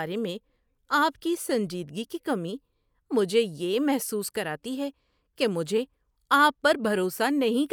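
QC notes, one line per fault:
No faults found in the speech. Nothing here needs a QC entry.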